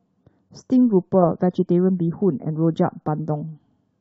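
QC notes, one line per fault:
No technical faults are audible anywhere in the speech signal.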